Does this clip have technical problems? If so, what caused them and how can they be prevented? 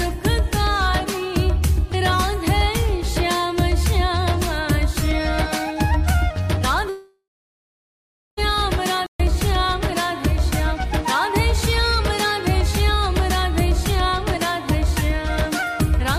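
Yes. From 6.89 to 8.39 s the sound smears into a fading buzz or hiss, then goes silent for about 1.1 s. This is likely a long network dropout that lost about 1.5 s of audio. Larger jitter buffers, redundancy or forward error correction, and a more stable connection would prevent it.

At 9.06 s the audio halts for 132 ms, then resumes at 9.20 s. This is likely a playback stall, with the player starved of data or its thread blocked. Deeper output buffering and a higher-priority audio thread would prevent it.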